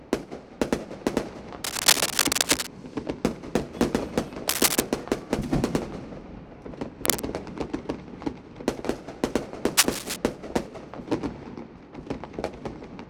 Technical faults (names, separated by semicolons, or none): cable scratch noise